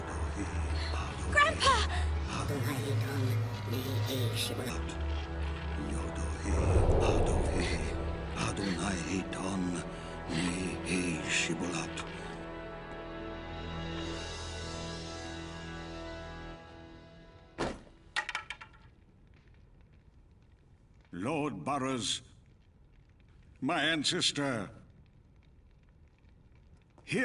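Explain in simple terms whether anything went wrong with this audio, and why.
Yes, a wrong sample rate from 2.48 to 4.70 s: the audio plays about 1.45 times too fast, raising pitch about 6.5 semitones, consistent with 22 kHz material played at 32 kHz.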